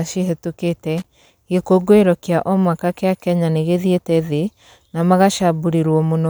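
A speech clip with one fault: loose connector crackle from 0.98 to 1.27 s, just before "gĩkũngũĩro kĩa omwaka kĩa". The sound turns into an irregular burst of crackle and scratching for about 0.3 s. A worn or dirty contact in the signal path is making and breaking as it moves. Each break chops the signal. Any DC riding on the line turns those breaks into pops.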